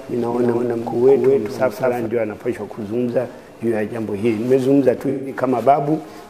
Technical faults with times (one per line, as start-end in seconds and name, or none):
0.00-2.06 doubled audio track
5.09-5.37 AAC frame loss with concealment